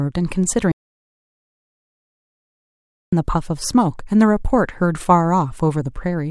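An audio dropout to silence runs from 0.72 s to 3.12 s. The speech cuts abruptly to silence with no room tone, likely from a lost input signal.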